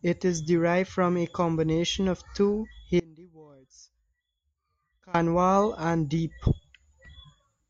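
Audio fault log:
3.00–5.14 s, audio dropout to a faint residue: the speech cuts out abruptly for 2.15 s, leaving only a faint leak roughly 25 dB down, likely a lost feed on a still-live path. Hard edges, not a fade or natural pause.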